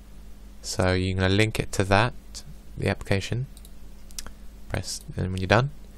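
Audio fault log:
No faults found anywhere in the audio.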